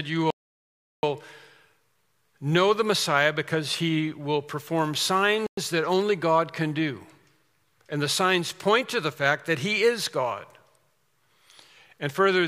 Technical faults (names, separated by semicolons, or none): Bluetooth stall